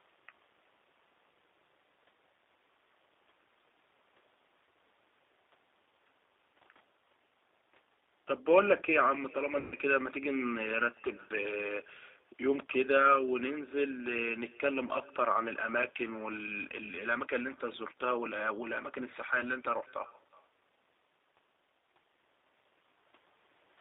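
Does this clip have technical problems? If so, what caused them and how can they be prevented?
Yes. Echo with no canceller runs throughout: a quieter, thinner copy of the speech trails it by roughly 400 ms, about 26 dB down, because the far-end loudspeaker feeds back into its own microphone. Running acoustic echo cancellation on the far end, or having that side use a headset, stops it.

The G.729 codec damage is also constant and plainly audible. The sound is boxed into a 300 Hz to 3.7 kHz band with a rough, synthetic edge, which fits 8 kbit/s G.729A rebuilding the speech from a filter and a few pulses. Using a wideband codec such as Opus, when both ends support it, avoids this.

VoIP packet loss concealed by the speech codec shows up from 9.60 to 9.76 s. Around 120 ms of audio is missing, and the decoder stretches the last sound into a buzzy tone or coloured noise that fades, and the voice stays weak for a moment afterwards. 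A steadier network path, a deeper jitter buffer, or forward error correction would cover gaps like this one.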